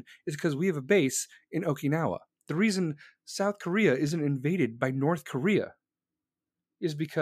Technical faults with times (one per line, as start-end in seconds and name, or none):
none